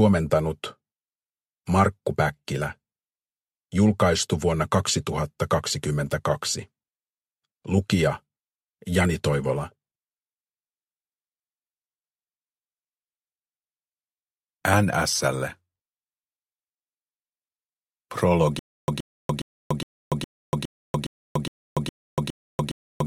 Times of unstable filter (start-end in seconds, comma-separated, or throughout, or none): none